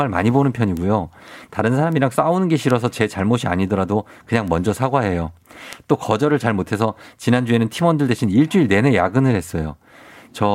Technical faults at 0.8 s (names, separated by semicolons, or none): bit error spike